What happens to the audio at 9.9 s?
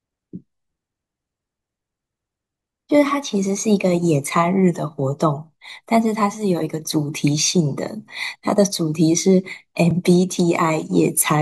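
At 9.91 s the speech drops into a block of digital silence lasting about 2.9 ms, which fits a 128-sample buffer that was not filled in time. The signal cuts out and back with no fade, so it registers as a tick or dip.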